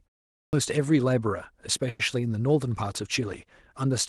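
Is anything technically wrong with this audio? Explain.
Yes, there are two faults.

At 0.35 s, after roughly a third of a second of silence at the start, the first sound comes in with a clipped start after a pause. About 180 ms of its onset is missing. The output device appears to have idled during the silence and needed time to wake and resynchronise, so the opening of the sound was discarded. The result is an abrupt entry that begins partway into the sound rather than at its natural onset.

From 1.89 to 2.01 s there is a call audio freeze lasting 100 ms. The last bit of sound is stretched into a short, decaying buzz or hiss rather than dropping to silence. When the sound resumes, it continues from exactly where it stopped, so nothing is missing. Everything after that point arrives about 100 ms later. The likely cause is delayed network packets draining the jitter buffer, with the receiver filling the gap until the stream caught up. 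The band-limited, coded texture throughout fits a 24 kbps Opus call link, with content above about 12 kHz absent.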